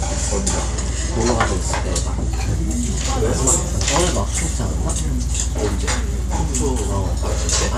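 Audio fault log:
2.31–7.77 s, resampler restarted on every block: a 100 Hz buzz rides on the sound, consistent with 10 ms blocks each resampled separately, likely a 48 kHz to 24 kHz conversion, erring at every edge. Unlike mains hum, it vanishes when the signal does.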